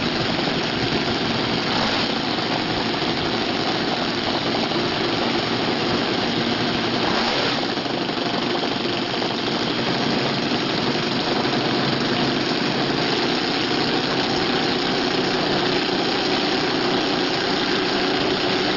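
Aliasing throughout: content above a 6 kHz fold point mirrors back as strong, gritty false tones close to signal level, which fits unfiltered resampling to 12 kHz.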